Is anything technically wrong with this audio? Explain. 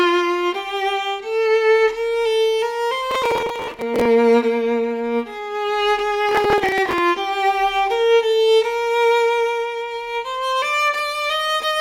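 Yes. Twice, at 3.11–4.05 s and again at 6.29–6.98 s, the processor falls behind and misses dozens of buffer deadlines; the grain of the damage fits buffers of around 5 ms. Each missed buffer is skipped, leaving a tiny silent hole with abrupt edges. Packed together, these holes produce processor overload crackle, a gritty, tearing rasp over the sound that stops as soon as the load eases.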